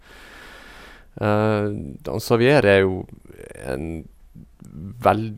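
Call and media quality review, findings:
Nothing stood out on listening to this speech recording.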